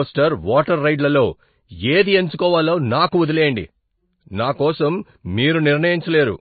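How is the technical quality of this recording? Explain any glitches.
Quality's rough: the speech has audible compression damage the whole way through. It's likely MP3 compression. Starved of bits, the encoder dropped everything above 4.5 kHz and let weak detail flicker, leaving a dull, watery sound that fits roughly 24 kbps.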